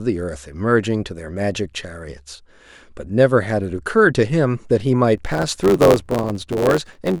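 From 5.17 s to the end of the clip, a block size mismatch (truncated) sets in. One stage hands over longer blocks than the next stage takes in, and the tail of every block is dropped. The discontinuity at each cut produces a steady buzz at about 91.9 Hz, which fits 512-sample blocks. Because part of every block is discarded, the speech runs about 1.07 times fast while its timbre stays.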